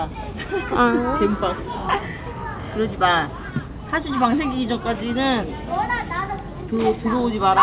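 No technical faults are audible.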